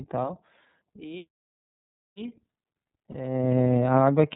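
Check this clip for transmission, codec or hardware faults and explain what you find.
Two faults are present: iLBC coding throughout the speech, and one brief lost iLBC frame near the end.

The iLBC codec is audible from start to finish. The band stops at 4 kHz, so sibilants and upper detail are missing. Each frame's excitation is coded independently, with no help from the previous frame, which gives the voice a plainly rough, slightly synthetic texture. The degradation is clearly noticeable and fits iLBC's 30 ms frame mode at roughly 13 kbps.

Lost iLBC frames cause a dropout from about 3.11 to 3.16 s, roughly 30 ms long, which fits a single missing frame. To conceal the gap, the decoder repeats the last pitch period blended with noise. The result is a short held, faintly buzzy vowel-like sound in place of the real speech. Because iLBC frames decode independently, normal speech returns almost immediately after the gap.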